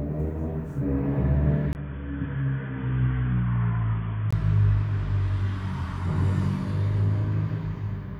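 At 1.73 s a gap of about 20 ms opens in the sound, and from there until 4.33 s the audio turns dull and boxy, with nothing above 3.5 kHz. The level also falls by a few decibels, and a new background noise floor appears, roughly 50 dB below the signal. This is likely the input switched to a poorer device, a narrower-band microphone or headset call profile, before the original input returns at 4.33 s.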